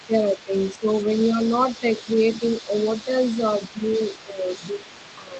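From 0.0 s to the end, a second voice sits faintly underneath, around 20 dB below the main speech. This is the other side's voice leaking through, likely residual echo the canceller failed to remove.

Between 0.06 and 0.87 s the main speech dips by up to roughly 10 dB for about half a second in total, losing level and brightness in patches. This is speech suppressed in double talk, likely the canceller ducking everything while both sides spoke.

From 1.33 to 2.07 s the same suppression returns more gently, with brief dips of around 5 dB. From 2.41 s to the end it deepens again to roughly 10 dB.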